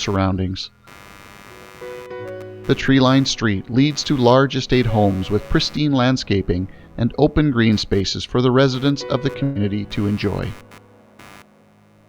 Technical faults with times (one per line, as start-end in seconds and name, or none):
0.00-12.09 computer activity noise
9.43-9.58 burst of packet loss